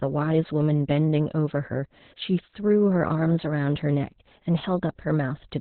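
Speech clip with Opus voice compression throughout: heavy damage points to a very low bitrate around 8 kbps in SILK narrowband mode, so the voice sounds muffled, hoarse and slightly robotic. A spectrogram shows a hard ceiling, with nothing above 4.2 kHz.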